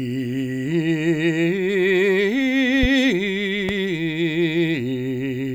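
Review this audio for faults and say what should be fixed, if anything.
A sudden voltage step, likely from a plug, switch or static discharge, entered the signal path twice. Each time it is heard as a loud pop, a single sharp burst roughly 10 dB above the music, at 2.83–2.87 s and 3.69–3.73 s, while the music continues underneath. Seating connectors firmly, muting outputs before switching anything, and grounding equipment against static would prevent it.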